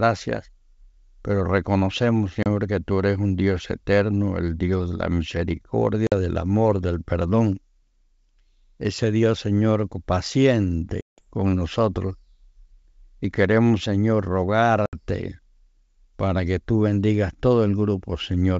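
Packet loss on an ADPCM call leaves hard-edged silent gaps at 2.43 s after "pero reconocemos" (30 ms), 6.07 s before "del amor del perdón" (50 ms), 11.01 s before "con nosotros" (170 ms) and 14.86 s (70 ms). Each gap knocks the decoder's predictor and step size out of step with the sender's, so the speech resumes with brief, slight distortion before settling.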